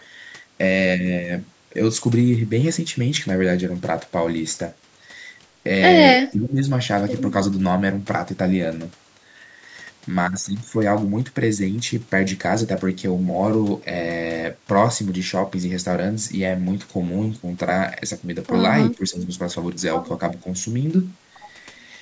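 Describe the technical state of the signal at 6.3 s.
At 6.3 s the speech sinks abruptly and stays held down until 6.6 s, a loss of roughly 15 dB at its deepest. This is speech suppressed in double talk, likely caused by the echo canceller mistaking the talker for loudspeaker echo while the far side spoke, and attenuating both.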